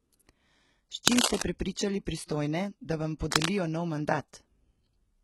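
Throughout the speech, the treble sounds synthetic rather than merely dull, with heavy codec damage: s sounds come out gritty, metallic or lispy. This is likely HE-AAC compression at a very low bitrate, around 16 kbps. Only the lower spectrum is coded, and the top is rebuilt by copying lower bands upward under a coarse envelope, so harmonics fail to line up across the crossover. Plain low-bitrate AAC would instead sound muffled, with the treble missing rather than fabricated.

From 1.06 to 1.43 s, dense, uneven bursts of scratching and rustling sit over the speech, about 5 dB above it. This is cable scratch noise, likely from a worn cable, connector or control carrying a DC voltage being moved, so its contact resistance jumps about rapidly. Unlike steady hiss or a single click, it is irregular, lasts for a moment, then stops.

At 3.19 s, just after "da vam", a short hiss spreads about 16 ms ahead of an attack, which sounds soft and smeared. 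This is pre-echo. The transform block spreads quantisation noise evenly, so noise sized for the loud onset also fills the quiet moment before it. It differs from the scratch noise because it is tied to the attack and is codec-shaped hiss, not rough crackle.

From 3.31 to 3.50 s, still just after "da vam", the same scratching returns at about 5 dB above the speech. This is cable scratch noise again, likely the same worn contact being disturbed.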